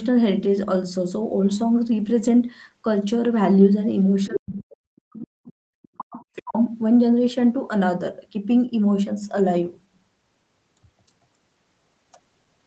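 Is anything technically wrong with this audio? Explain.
Yes. The speech is suppressed in double talk, and the other side's voice leaks through.

Speech suppressed in double talk occurs from 4.27 to 5.57 s and again from 5.97 to 6.56 s. The likely cause is both parties talking at once, which left the echo canceller unable to tell the local talker from loudspeaker echo, so it turned everything down. The speech sinks by as much as about 40 dB, losing around a second in the first stretch and about half a second in the second.

The other side's voice leaks through in three brief scraps, at 4.34 to 4.40 s, 5.83 to 5.88 s and 6.35 to 6.42 s. The far-end voice was likely playing from the device's loudspeaker, and the echo canceller removed only part of it from the microphone signal. The first scrap is nearly as loud as the speech, the third sits well below it, and the second is faint. Each lasts well under a tenth of a second.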